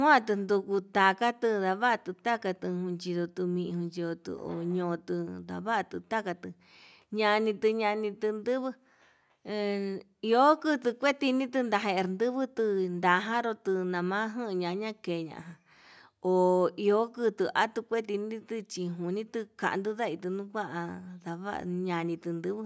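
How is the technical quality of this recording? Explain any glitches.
No glitches to report: the speech has been through a call's microphone processing, so the lowest bass is trimmed and nothing sits above 8 kHz, both normal for a call path rather than faults.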